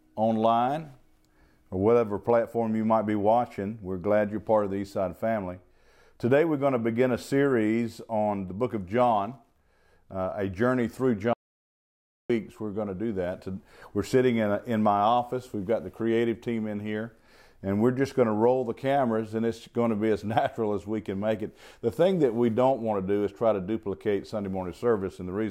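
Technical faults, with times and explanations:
11.33 to 12.30 s, audio dropout to silence: the speech cuts off abruptly into silence with no room tone for about 0.96 s, most likely because the input was lost while the recorder kept writing silence.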